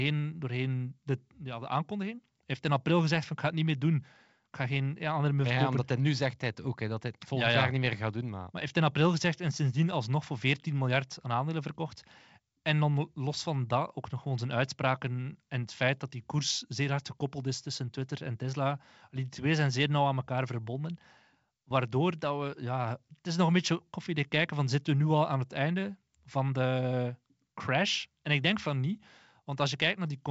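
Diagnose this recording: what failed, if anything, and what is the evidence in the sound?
Nothing has failed here: the speech comes through G.722 wideband telephone coding at 64 kbit/s, and that coding path is doing its job, leaving little to no audible trace in the sound.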